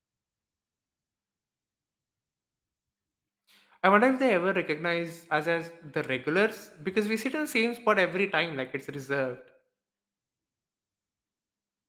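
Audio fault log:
No faults heard in this speech recording.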